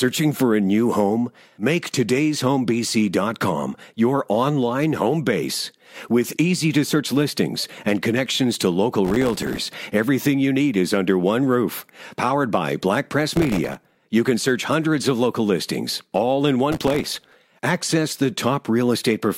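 Bursts of gritty, tearing crackle ride on the speech from 9.05 to 9.63 s, 13.36 to 13.96 s and 16.72 to 17.36 s. This is processor overload crackle: dozens of very short buffers, around 1.5 ms each, missed their deadlines and came out as tiny silent gaps.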